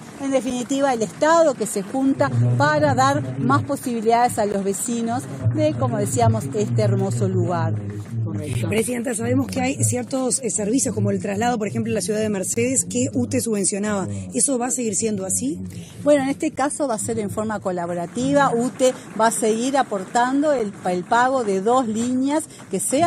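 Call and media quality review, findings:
Gap between stream segments: hard-edged silent holes at 0.50, 4.52, 8.53, 12.54–12.57, 16.56 and 20.59 s, each about 7–21 ms. Player/packager timestamp misalignment at 4 s segment boundaries. Unlike packet loss, nothing is missing; the audio resumes exactly where it stopped.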